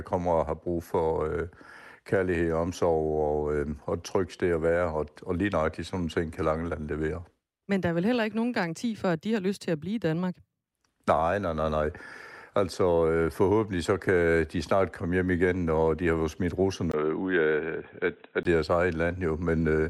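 The clip is speech. At 16.92 s, just after "de har jo smidt", a short gap of about 20 ms is heard. Then the sound turns dull and narrow until 18.45 s, with nothing above 3.9 kHz. A new noise floor appears, around 50 dB below the speech. The level stays about the same. This is likely an input switched to a poorer device, such as another microphone or a headset's call profile.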